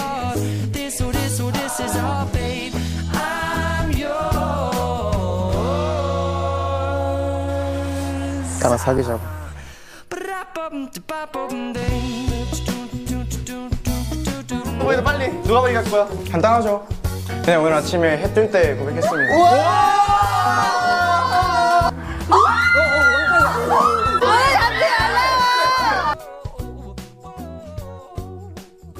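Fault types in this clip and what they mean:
Underrun with held sample: at about 8.98 s the output buffer runs dry for 5.8 ms, 256 samples, and the converter holds its last value until data returns. The waveform shows a short flat shelf where the sound simply stops. On a spectrogram it appears as a brief, narrow vertical gap. Since essentially nothing is lost and playback resumes where it paused, the restart is soft rather than a sharp click.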